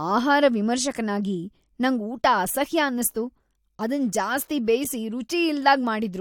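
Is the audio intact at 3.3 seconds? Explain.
Yes, at 3.3 seconds the audio is intact, with no audible fault at that moment.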